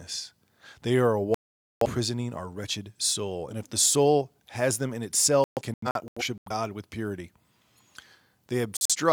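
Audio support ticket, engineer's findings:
Digital broadcast dropout: audio mutes 1.34–1.86 s after "are a", back at "our wretched soul and". Broken holes 5.44–6.51 s (longest 128 ms) after "soul has them in", back at "with purity". Short holes 8.77–8.96 s. Receiver lost signal or frames failed checksum; it muted until clean frames resumed.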